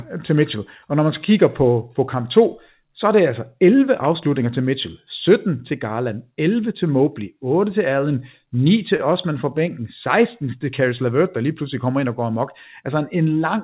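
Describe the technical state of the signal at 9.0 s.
A short stall from a late packet runs from 8.96 to 9.01 s: the jitter buffer emptied, so about 26 ms of held, faintly buzzy sound filled the gap, with nothing lost.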